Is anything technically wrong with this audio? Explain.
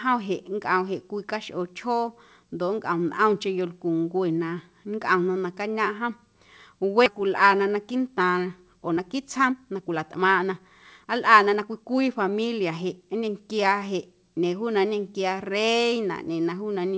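Yes. At 7.06 to 7.08 s the speech jumps abruptly forward with no gap, and about a second and a half of it is simply gone. This is a skip ahead: audio was dropped while later packets were already queued, so playback stitched the two sides together directly.

From 7.61 to 10.6 s the speech runs hurried at 117% speed, and again from 11.04 to 13.78 s at 112%, with the pitch unchanged. This is jitter buffer speed-up: after a backlog built up, the receiver repeatedly trimmed pitch-period-sized slices, removing roughly half a second and roughly 0.4 seconds respectively to bring the delay back down.

Throughout, the G.722 call path leaves nothing above 8 kHz.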